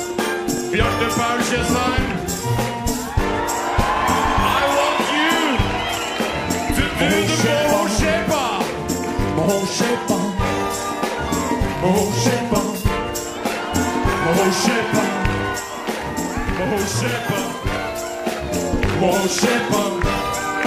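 Three brief stutters break into the audio, where a short slice of about 21 ms plays twice with a hard join, at 0.58 s and 10.48 s, and three times at 11.78 s. This is a repeated buffer, fitting a 1024-sample block replayed when fresh audio arrived late. From 15.54 s to 18.57 s the sound fades over about a quarter second into a hissier, about 3 dB quieter version, then back, because a digital radio lost its signal and blended to the station's FM analogue feed.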